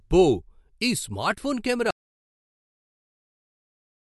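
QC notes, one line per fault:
1.91 s to end: audio dropout to silence. The speech cuts off mid-flow right after "ఈ స్మార్ట్ఫోన్" and the rest is silent with no room tone, likely because the input was lost while the recorder kept writing silence. Whatever followed is gone.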